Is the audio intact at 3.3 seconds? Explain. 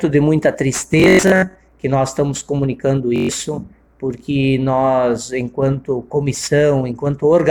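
No. A Bluetooth stutter runs from 3.16 to 3.29 s, ending right at that moment. Audio packets arrived late or not at all, so the receiver kept replaying its last buffer, which fits about six lost packets. This gives a brief buzzing repeat. About 128 ms of sound is lost, and playback resumes further along.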